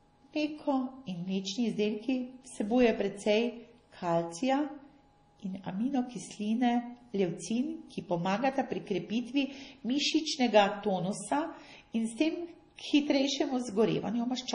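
From start to finish the speech sounds watery and swirly, with metallic chirps on s sounds, smeared onsets, and nothing above 10.6 kHz. This is heavy MP3 compression, likely at a low bitrate around 32 kbps, where starved frequency lines flicker on and off between frames.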